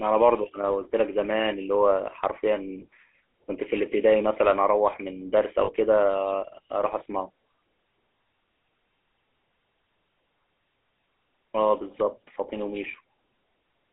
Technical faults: GSM full-rate codec; lost GSM frames

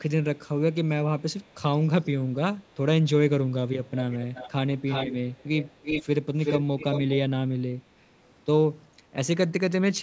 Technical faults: echo leak

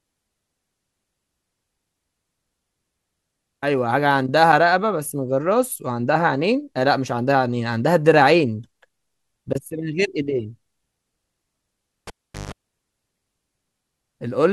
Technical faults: cable pulled and plugged in

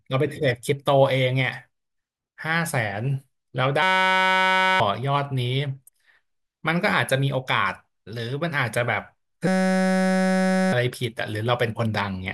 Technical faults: system hang loop

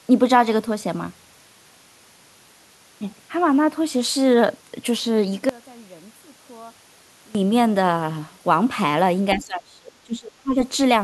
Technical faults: one channel inverted; speech suppressed in double talk

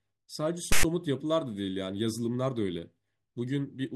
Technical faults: file tags played as audio

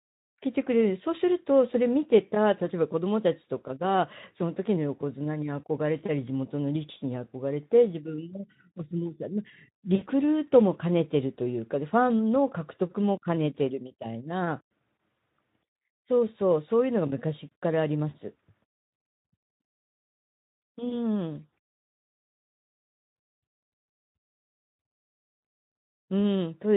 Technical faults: VoIP packet loss concealed by the speech codec

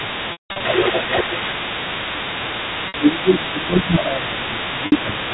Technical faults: speech suppressed in double talk; other side's voice leaking through; packet loss with pitch repetition

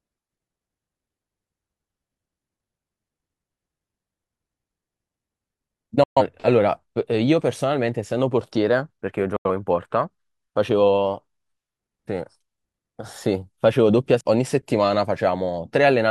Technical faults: digital broadcast dropout; CD skip

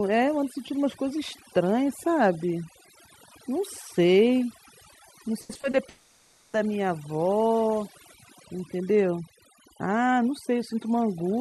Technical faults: overdone noise removal; repeated packet loss (robotic sound); long network dropout

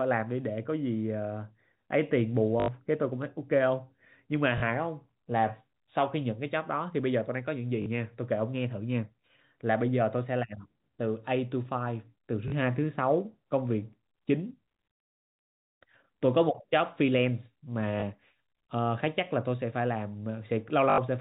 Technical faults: packet loss with last packet repeated

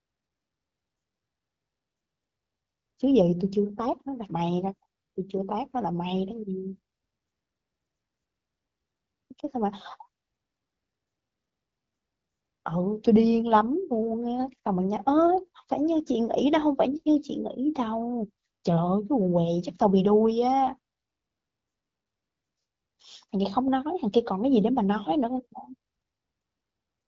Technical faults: none

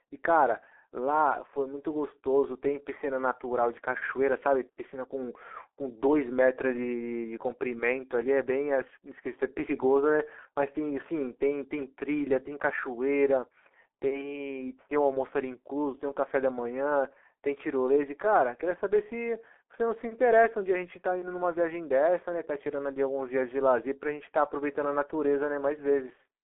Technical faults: G.723.1 codec

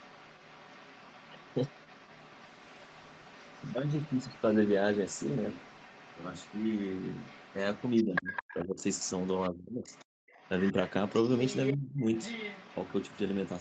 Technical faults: other side's voice leaking through; call bitrate drop; speech suppressed in double talk; background gated by the echo canceller

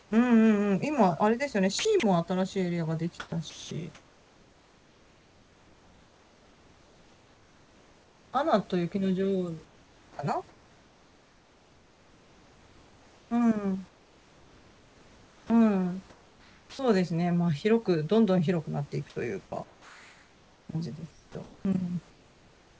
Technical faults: comfort noise in place of the background; sound chopped by the voice detector; sound dropped by the voice detector; onset clipped by the voice detector

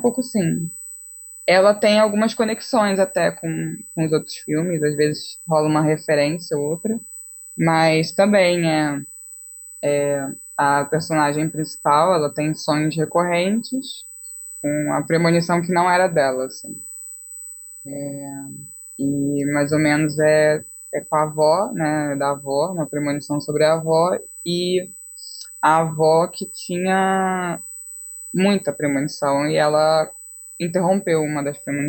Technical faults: USB whine

